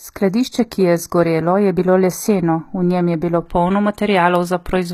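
From the start to 3.46 s, one channel of the speech runs slightly behind the other, by only a small fraction of a millisecond, and the two are then summed to mono. Content shared by both channels cancels at regularly spaced frequencies, with the first notch around 3 kHz. The result is channel delay (comb filtering): the speech sounds hollow and phasey, with some of its presence and clarity carved out, until the effect stops at 3.46 s.

Throughout the clip, the MP3 file is likely low-bitrate audio saved at a high bitrate. It sounds as though a heavily compressed HE-AAC encode at around 20 kbit/s was re-encoded as MP3 at around 194 kbit/s. The larger file cannot restore what the first encoding discarded. Nothing is present above 15 kHz, so the speech lacks air at the top, and the artefacts of the original low-rate encoding are still there.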